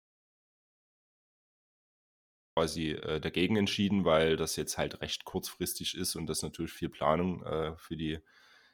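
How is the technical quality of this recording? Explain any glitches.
The recording opens with an audio dropout to silence lasting until 2.57 s. The input signal was likely lost, so silence was written instead: the first 2.57 s are silence without room tone, and sound cuts in abruptly.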